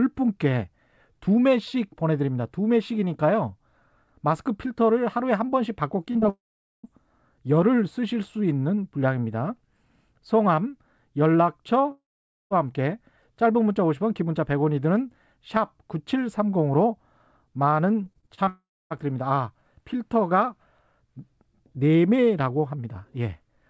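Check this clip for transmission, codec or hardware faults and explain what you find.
The speech carries several transmission faults: a constant comb-filter colouration, brief concealed gaps, three long dropouts, and a robotic stretch. The G.722 call path band-limits everything above 8 kHz.

Channel delay (comb filtering) runs throughout. One channel lags by a few samples, just under a tenth of a millisecond. Summing to mono cancels energy at spaced frequencies, starting around 7 kHz, which gives a hollow, phasey colouration with fixed notches.

Short concealed packet loss occurs at 6.12–6.17 s and 6.20–6.24 s. The decoder extrapolated the preceding sound over each 20 ms hole, giving a quick smear or wobble.

Long network dropout is the likely cause of the gaps at 6.30–6.85 s, 11.91–12.52 s and 18.49–18.92 s. Each begins with a fading buzz or hiss, then silence, and the speech resumes with material missing.

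Repeated packet loss (robotic sound) runs from 18.04 to 18.49 s. Six gaps, the longest 25 ms, were patched in quick succession, concealing a quarter of the stretch and making it choppy before the final dropout.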